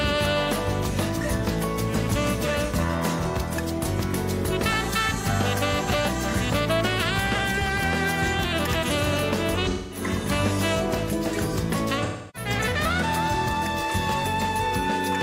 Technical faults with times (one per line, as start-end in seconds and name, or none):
9.69-10.02 AAC frame loss with concealment
12.03-12.49 AAC frame loss with concealment